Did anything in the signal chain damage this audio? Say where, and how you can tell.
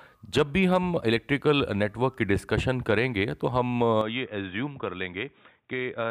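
Yes. From 4.01 s to the end, the speech turns dull and boxy, with nothing above 3.8 kHz, a few decibels quieter and over a faint new noise floor, with no gap at the change. This points to the input likely being switched to a poorer device.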